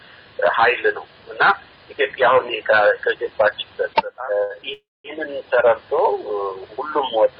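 A short stall from a late packet comes at 4.43 to 4.51 s. One packet arrived after its playout time, so the jitter buffer emptied and the receiver held the last bit of sound for about 59 ms until the packet turned up. Playback then picked up exactly where it had stopped, so nothing is lost. The audio simply lags by that 59 ms from this point, and the held sound comes across as a brief smear with a slight buzz or dip.

A call audio freeze follows at 4.73 to 5.06 s. The sound stops moving forward and the last fragment is drawn out as a fading buzz or hiss, which settles into about 220 ms of silence before the audio resumes from the same place. The gap runs about 311 ms in all and nothing is missing. The likely cause is a run of packets held up in transit, leaving the jitter buffer empty so the receiver had to fill the wait itself.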